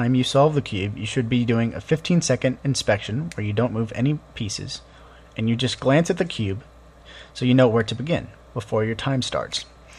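No technical faults can be heard in this recording.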